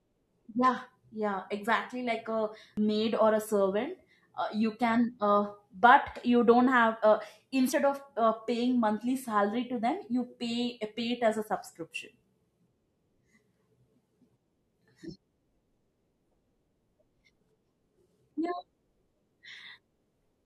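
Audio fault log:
2.77 s and 7.72 s, audio missing between chunks: about 50 ms vanishes right after "yeah exactly like a" and "you don't have uh", likely lost at 5-second chunk handovers, so each side butts straight together.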